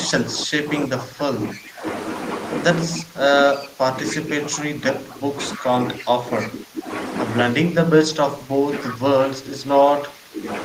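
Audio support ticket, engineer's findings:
Speech suppressed in double talk, three stretches: 0.07 to 1.85 s (about 1.5 s affected, dips up to about 20 dB), 2.96 to 6.9 s (about 3 s, up to about 15 dB), 7.54 to 10.45 s (about 2 s, up to about 15 dB). Speech ducks while the far end talks over it. Likely the AEC/suppressor can't separate near talker from loudspeaker echo, so it clamps both.

Echo leak, four short bursts at 1.54 to 1.58 s, 3.53 to 3.58 s, 6.4 to 6.47 s and 8.9 to 8.94 s. Delayed copy of the speech trailing by 308 ms, at about 30, 25, 15 and 15 dB below the speech, so it gets louder later on. Likely the loudspeaker side's echo canceller letting residual through and sending it back.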